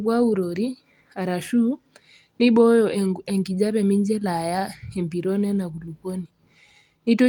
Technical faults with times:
none

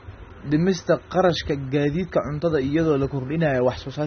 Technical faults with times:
0.00-4.06 AAC compression

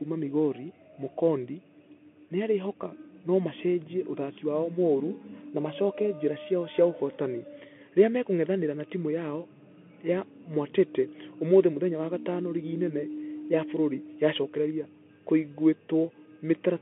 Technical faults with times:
0.00-16.81 Bluetooth CVSD headset codec

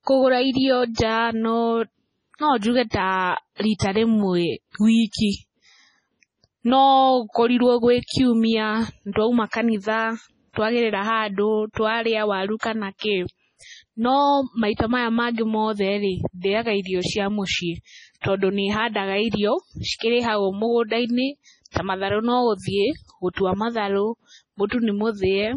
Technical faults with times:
0.00-25.56 MP3 compression
21.71-21.76 pre-echo

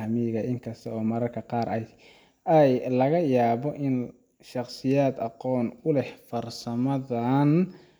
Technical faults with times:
none

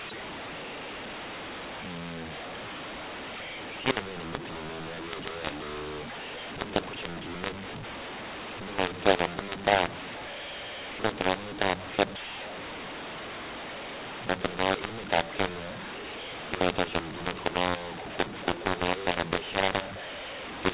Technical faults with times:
0.00-20.73 mu-law and A-law mixed up

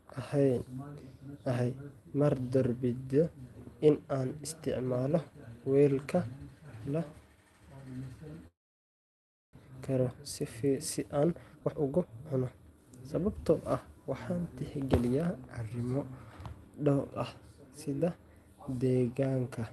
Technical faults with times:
8.47-9.57 long network dropout
9.65-10.33 jitter buffer speed-up
11.23-12.93 jitter buffer speed-up

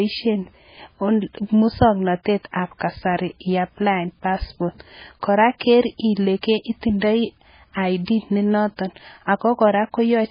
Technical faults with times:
0.00-10.31 MP3 compression

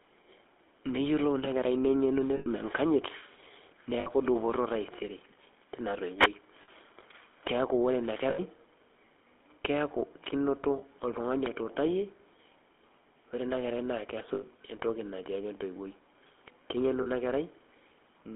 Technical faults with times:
0.00-18.35 GSM full-rate codec
2.36-2.48 lost GSM frames
4.00-4.10 lost GSM frames
6.17-6.29 wireless microphone noise hit
6.62-6.69 lost GSM frames
8.30-8.39 lost GSM frames
10.78-10.84 lost GSM frames
14.34-14.43 lost GSM frames
17.02-17.07 lost GSM frames

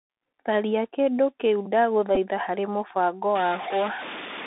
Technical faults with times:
0.00-4.46 Bluetooth CVSD headset codec
2.15 Bluetooth headset packet repeated
3.35-4.46 stuck bit

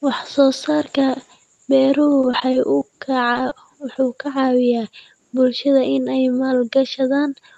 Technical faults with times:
0.53 repeated buffer
2.21-2.83 repeated packet loss (robotic sound)
3.33-3.53 short concealed packet loss
3.93-3.97 short concealed packet loss

